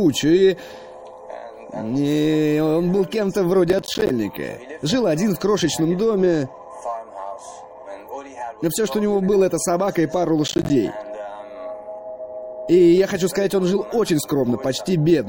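Processor overload crackle occurs twice, from 3.70 to 4.10 s and again from 10.48 to 10.70 s. In each stretch the processor falls behind and misses a run of buffer deadlines, and every missed buffer is dropped as a brief hole of silence. The gaps are short and hard-edged, consistent with buffers of around 10 ms, and many of them in a row turn into a gritty, tearing crackle over the audio that stops once the load eases.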